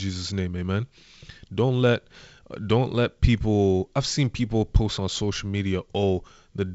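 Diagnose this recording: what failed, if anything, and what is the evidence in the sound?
Nothing in the speech points to a failure at any stage: the only processing that can be heard is G.722 wideband telephone coding, with the audio band-limited to nothing above 7.7 kHz and a light graininess that fits the lower band losing bits at around 56 kbit/s.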